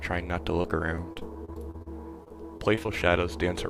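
From 0.61 to 1.88 s, and again from 2.24 to 2.90 s, the sound turns choppy and robotic. This is repeated packet loss: short holes of up to 36 ms keep recurring, each patched by stretching the previous sound, covering about a sixth of each stretch.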